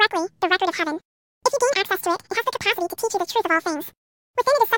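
From start to finish, the speech plays at twice its proper speed and a full octave too high, about 12 semitones up. The fault is audio read two samples at a time (double speed). The reader treated each pair of samples as a single frame, as if the stream held two channels or samples of double width, so the timeline collapses to half.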